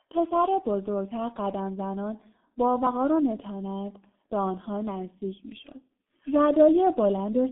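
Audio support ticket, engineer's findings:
G.723.1 codec, whole clip: speech muffled and hoarse, consonants smeared, no content above 3.8 kHz, band roughly 200 Hz to 3.6 kHz. Heavy damage consistent with the 6.3 kbit/s mode; 30 ms frames and a slow-updating vocal model lose detail.

Audio missing between chunks, 2.87 s: abrupt skip, about 50 ms of speech gone, edges butted together with no silence. Likely cause is the capture or processing stage dropping samples at a boundary between 3 s chunks while closing one and opening the next.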